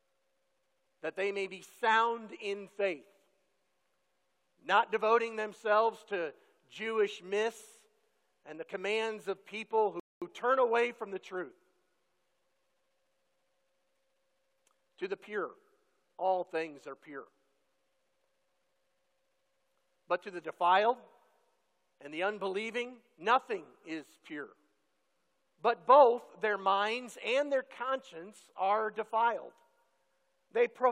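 The player ran dry of downloaded audio at 10.00 s and halted playback until more data arrived, a rebuffering stall lasting until 10.22 s. For those roughly 220 ms the sound drops abruptly to silence, then picks up again at exactly the point where it broke off. No material is skipped or repeated. The gap simply inserts about 220 ms of extra time into the audio, so everything after it arrives that much later.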